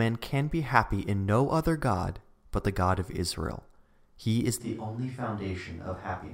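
A switch to a distant microphone occurs at 4.62 s in this speech recording and holds to the end. From that point the sound turns abruptly roomy and hollow, loses bass, drops by about 5 dB, and carries room noise around 30 dB below the speech. The likely cause is that the close microphone's feed dropped out, leaving only a pickup set further back, which hears more of the room.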